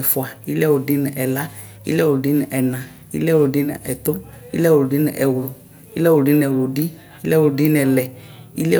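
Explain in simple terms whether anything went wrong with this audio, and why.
Nothing went wrong here.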